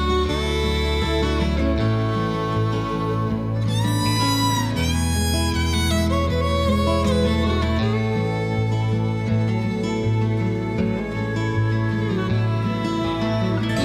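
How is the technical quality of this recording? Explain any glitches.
No glitches or technical faults are audible anywhere in the recording.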